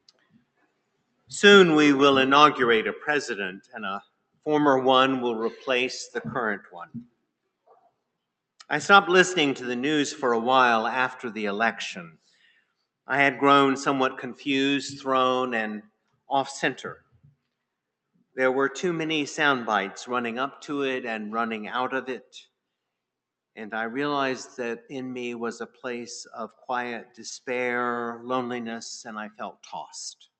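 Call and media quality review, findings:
Noise suppressor applied to music or sounds, whole clip: speech-tuned suppressor treating sustained tones and tails as noise, so the level pumps by around 5 dB. Disable NS for non-speech sources.

Sound cut by the noise suppressor at 0.01–1.31, 3.58–4.46, 6.59–8.63, 12.1–13.09, 15.82–18.36, 22.21–22.48, 24.81–27.19 and 29.31–30.27 s: held sound and decays dropped by about 12–22 dB while onsets survive.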